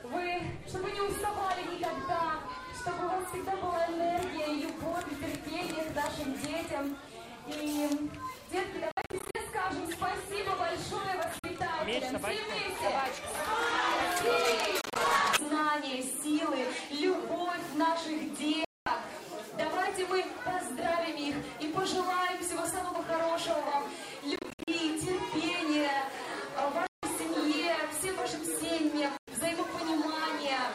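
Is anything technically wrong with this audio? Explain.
Yes. A Bluetooth dropout, likely from packets reaching the headphones too late and being discarded, cuts the sound to silence in gaps within 8.91–9.35, 11.39–11.44, 14.81–14.96, 18.65–18.87, 24.36–24.68, 26.87–27.03 and 29.17–29.28 s. Each hole has abrupt edges or a fade of a few milliseconds, and the sound resumes further along, as though it had kept playing.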